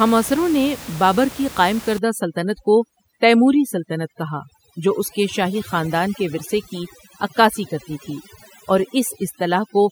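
From 1.98 s, just after "نے بابر کی قائم", the background drops and breaks into twinkling specks: overdone noise removal, over-suppressing bands near the room noise floor.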